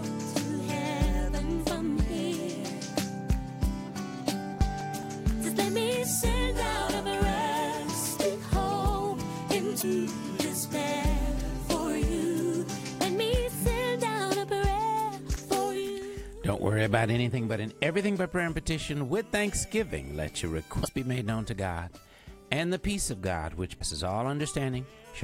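From 4.14 to 5.47 s you get CD scratch ticks: seven small clicks at a steady rate of about five a second, each only a few milliseconds long. That's a scratch or blemish on the disc wiping out more data than the error correction can rebuild, once per revolution. The player papers over the damaged samples by interpolating or muting them, so each pass shows up as a tiny tick or micro-dropout.

Later there are four short glitches from damaged data in a compressed stream, at 9.78, 15.32, 20.81 and 23.76 s, each lasting about 56 ms. At those points part of the encoded data is corrupt, so the decoder misreads or discards those frames, loses sync and has to hunt for the next valid frame header. You hear it as a brief glitch before the sound picks up again.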